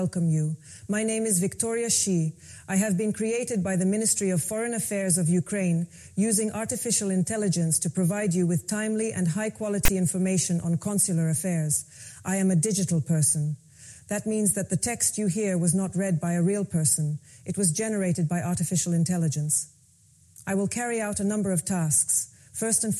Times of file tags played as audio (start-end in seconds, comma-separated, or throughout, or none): 9.85-9.89